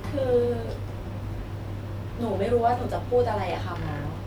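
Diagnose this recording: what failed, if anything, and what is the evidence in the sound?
No technical fault is audible.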